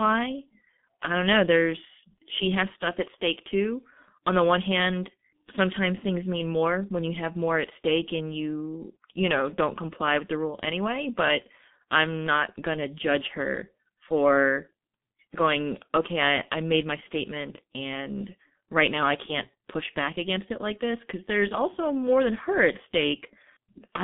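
Speech runs through a G.723.1 codec for the whole clip, with heavy codec damage. The band is confined to roughly 150 Hz to 3.6 kHz, and nothing survives above 3.7 kHz, which leaves the sound muffled. The codec's 30 ms frames update its vocal model too slowly to follow fast articulation, so consonants smear and the tone turns hoarse. The coarseness fits a bitrate around 6 kbit/s.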